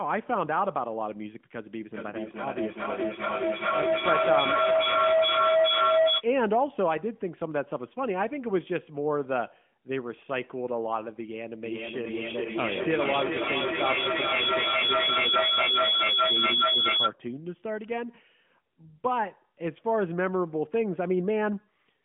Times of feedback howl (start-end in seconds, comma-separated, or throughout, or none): 1.93-6.29, 11.65-17.16